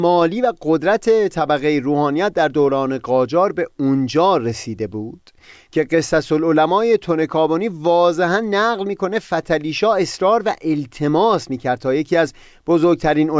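No technical faults can be heard anywhere in the recording.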